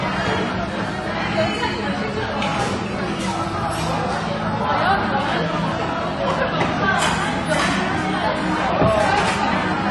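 From start to finish the audio was likely squeezed through low-bitrate AAC compression, AAC-LC at a rate that fits roughly 32 kbps. With so few bits per frame, the encoder discards the top of the spectrum and quantises what remains coarsely. Nothing survives above 11.5 kHz, so the sound is dull and lacks air, and the coding damage is plainly audible across the whole clip rather than confined to any single moment.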